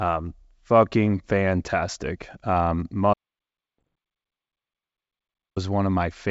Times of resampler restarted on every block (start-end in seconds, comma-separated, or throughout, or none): none